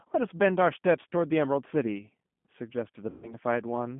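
From start to finish the speech has a thin, slightly rough, synthetic edge, with nothing above about 3.4 kHz and little below about 150 Hz. That is the G.729 codec, plainly audible here, with a band and texture consistent with its 8 kbit/s telephone variant. Rather than storing the waveform, it rebuilds each short frame from a vocal tract filter, a pitch predictor and a handful of pulses, which leaves the grainy, processed quality.

Between about 3.10 and 3.37 s the voice turns into a smeared, stretched sound that sags in level, and it stays weak or distorted for a while after the gap ends. This is VoIP packet loss concealed by the speech codec. About 130 ms of audio never arrived, so the decoder kept repeating its last pitch and filter at falling gain. Because each frame builds on the previous one, recovery lags once packets resume.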